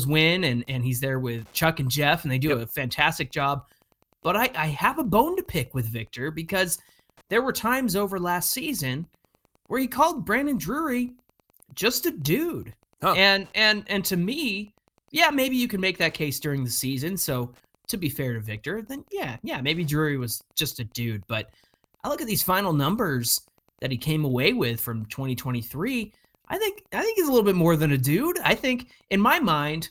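A faint, steady ticking runs under the speech for the whole clip, close to ten ticks a second and sitting around 40 dB below it. This is Wi-Fi interference: a nearby radio's beacon, repeating every 102.4 ms, is being picked up and rectified by the audio circuitry.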